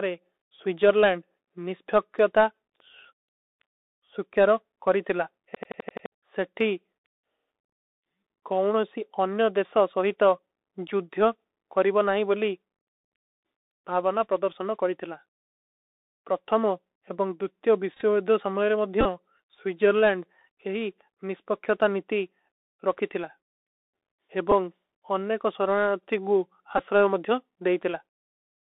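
A speech recording heard through a narrow, boxy telephone band, with scratchy s sounds and a fine granular hiss under everything. That is the Bluetooth CVSD headset codec: its one-bit up/down coding at 64 kbps limits the line to roughly 300 Hz–3.7 kHz, and the adaptive step can't keep pace with sharp high-frequency energy, so the damage is plainly audible. At 5.55–6.06 s, right after "ସୁକ୍ଯାରୋ କରୀ ତିଲା", the sound turns into a machine-gun stutter at about 11.7 Hz as one 85 ms fragment plays six times over, losing roughly half a second of audio. This is a system hang loop: the computer or driver stalled while the audio hardware kept replaying its ring buffer, which fits a 4096-sample buffer. Short buzzy roughness appears at 17.94–18.02 s, just after "ପ୍ରତ୍ଥମୋଂ ଏବଂଗ ଦୁତ୍ଯୋ", with about 45 ms lost across 82.5 ms, and at 19.01–19.06 s, just before "ସ୍ଵୀଜରଲୈଂଡ ଯହୀ", with about 34 ms lost. Briefer ticks follow at 24.51 s and 26.78–26.80 s. 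These are Bluetooth headset packet repeats: when voice packets dropped, the chip decoded the previous 3.75 ms packet again, giving a brief buzz during runs and a click for isolated losses.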